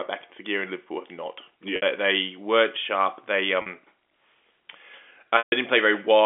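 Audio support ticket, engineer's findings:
Packet loss with pitch repetition at 1.76 s (60 ms gap), 3.62 s (40 ms) and 5.38 s (140 ms). Jitter buffer and concealment stage. The short gaps sound held and buzzy: the receiver loops the last pitch period and fades it over about 50 ms. The 140 ms gap outlasts the fade, drops to silence, then cross-fades back. Gap lengths fit lost 20 ms packets. Narrow telephone band from the G.711 path is audible throughout.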